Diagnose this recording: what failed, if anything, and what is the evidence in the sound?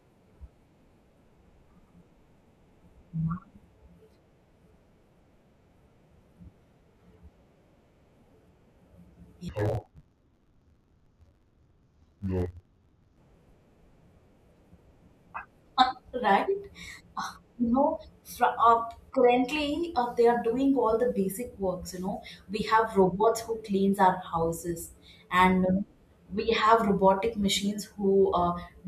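From 9.49 to 13.18 s the speech turns dull and robotic, with a buzz near 94 Hz and no clear octave drop. This is interleaved audio read as planar at the sample-format conversion stage: each 10.67 ms block, which fits a 512-sample buffer, is split into half-speed left and right halves.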